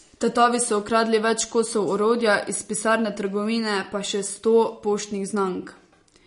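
Throughout the speech the sound is watery and swirly, with a metallic chirping on s sounds, smeared consonant attacks, and nothing at all above 10.6 kHz. These are plainly audible marks of MP3 compression, the likely cause. At a low rate the encoder runs short of bits, so it cuts the treble at a fixed point and drops weaker frequency components that flicker on and off from frame to frame. The damage fits a bitrate of around 40 kbps.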